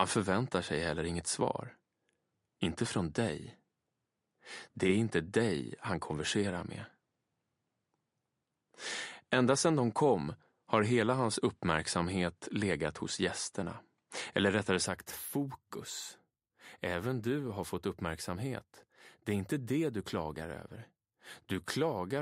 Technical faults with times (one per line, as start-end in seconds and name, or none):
0.00-14.86 input switched to a poorer device